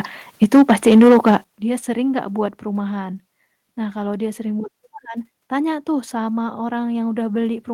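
From 0.42 to 1.37 s the speech carries a harsh, crackly edge on its loudest syllables. This is microphone overload: peaks run about 7 dB past the converter's limit and roughly a tenth of the samples are flattened, likely because the input volume was set too high. Unlike a level drop, the loudness stays put; the tops of the waveform are sheared off, adding grit rather than changing volume, and it clears just before "dia sering enggak".

Starting within that stretch, the microphone volume is stepped down three times: at 0.44 s by about 3 dB, at 1.44 s, right before "dia sering enggak", by about 11 dB, and at 2.46 s, just after those words, by about 2 dB. Each is likely the call software reacting to the clipped peaks by lowering input gain in one jump. Voice and background drop together and instantly, with no added distortion, which separates these steps from the overload's crackle.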